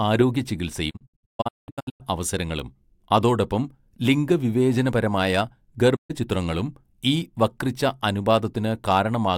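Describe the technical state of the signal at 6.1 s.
A digital broadcast dropout runs from 5.95 to 6.12 s, so 6.1 s falls inside it. The receiver stopped getting valid frames and muted: the speech fades out over about 20 ms, leaving a silent gap whose length fits roughly four lost frames, and what was sent meanwhile never returns.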